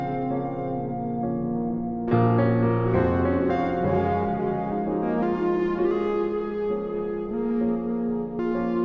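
No technical faults are audible anywhere in the audio.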